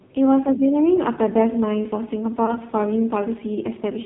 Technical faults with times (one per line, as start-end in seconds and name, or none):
0.00-4.06 AMR narrowband mobile codec
2.46-2.58 lost AMR speech frames